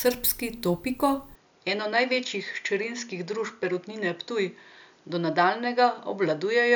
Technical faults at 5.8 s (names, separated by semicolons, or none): input switched to a poorer device